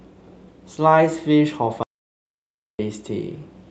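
A speech recording with an audio dropout to silence from 1.83 to 2.79 s. About 0.96 s of signal vanishes into silence, with no room tone. The waveform shows a dead flat line and the spectrogram a fully black band, most likely from a momentary loss of the input feed. The call codec's band limit near 8 kHz stays visible on either side.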